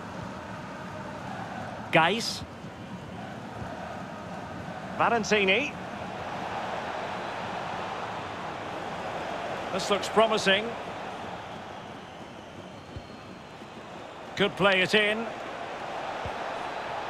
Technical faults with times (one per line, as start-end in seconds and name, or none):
none